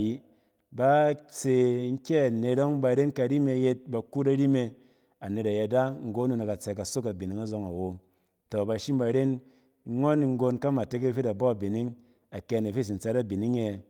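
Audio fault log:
Throughout: clock drift between sender and receiver. The sending clock runs about 2% slow relative to the receiver, so the jitter buffer keeps draining. Playback has to fill the shortfall continuously, which leaves small timing hiccups scattered unevenly across the whole speech clip.
0.52–13.6 s: repeated timing corrections. The receiver repeatedly repeats short fragments to stay in step, always lengthening and never trimming. The net effect is playback at about 98% speed, adding roughly 0.3 s overall. Each correction is small.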